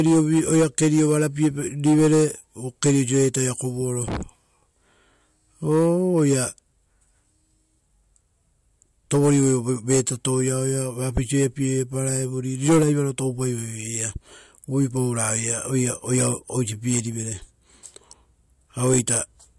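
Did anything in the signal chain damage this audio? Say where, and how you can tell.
No, nothing in the chain audibly damaged this speech recording, and its level, continuity and timing hold steady throughout with no stage leaving a mark on the signal.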